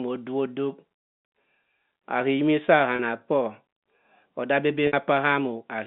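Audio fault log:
2.96–2.99 s and 4.87–4.93 s, packet loss with pitch repetition: about 30 ms, then 60 ms, of the G.711 telephone stream went missing. The receiver looped the last pitch period to fill each gap. The first sounds like a briefly held, buzzy tone. The second outlasts the fade, so it dies away before the speech cross-fades back in.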